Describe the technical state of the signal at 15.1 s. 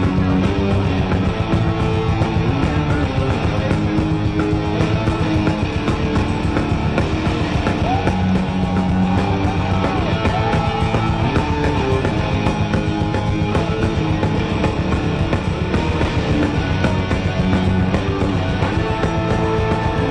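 At 15.1 s the signal is intact, with no dropout, distortion, or other technical fault.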